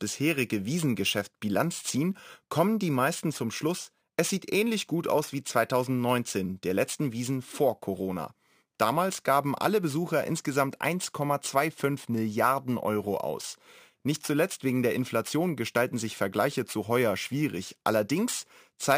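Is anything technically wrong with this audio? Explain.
Yes. The speech has imaging from sample-and-hold upsampling throughout. Each sample was repeated with no smoothing filter. A mirrored spectrum fills 12 kHz to 24 kHz, about 20 dB down. That fits a 24 kHz source doubled. It sounds like bright metallic fizz following the speech.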